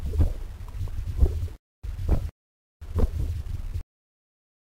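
At 3.81 s the audio has a cut-off end. The final buffers were never written, so the sound stops mid-event and drops straight to digital silence with no decay.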